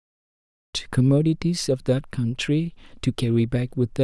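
There are no technical faults to describe in this speech clip.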